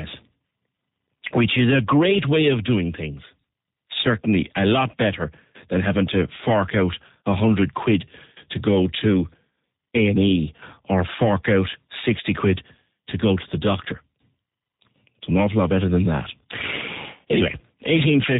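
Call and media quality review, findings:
Speech rough, buzzy, slightly synthetic for the whole clip; top end dull, nothing audible above 4 kHz; damage plainly audible. Probable component: G.729 codec, sound consistent with G.729A at 8 kbit/s. Mechanism: speech resynthesised per 10 ms frame from a vocal-tract filter, pitch predictor and sparse pulses, with narrowband cut-off.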